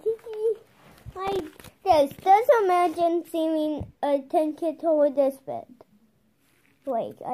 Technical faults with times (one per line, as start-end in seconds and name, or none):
1.27-1.40 processor overload crackle